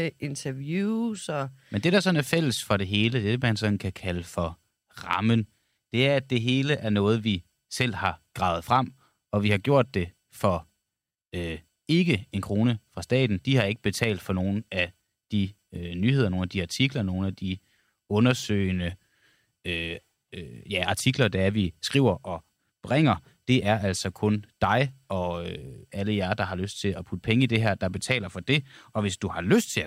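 No technical faults are audible.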